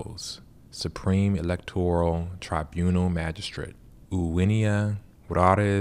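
No technical faults can be heard anywhere in the speech recording; the signal stays continuous and stable throughout.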